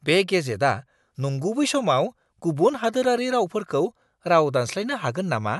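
No technical faults can be heard in the recording.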